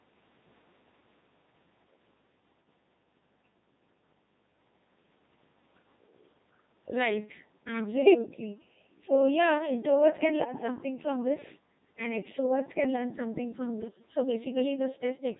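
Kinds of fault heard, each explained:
Codec 2 vocoder: The whole clip is rebuilt from pitch, voicing, level and a coarse spectral envelope instead of the real waveform, so the speech sounds heavily robotic and buzzy, fitting a rate near 2.4 kbit/s; unlike ordinary codec smearing, none of the original waveform texture survives.
bit errors on digital voice radio: Flipped bits corrupt whole vocoder frames at 8.04 to 8.14 s, 10.44 to 10.68 s and 13.78 to 14.0 s, making pitch, level and timbre lurch into bleeps, warbles and gibberish; unlike dropouts, the sound keeps going but turns wrong.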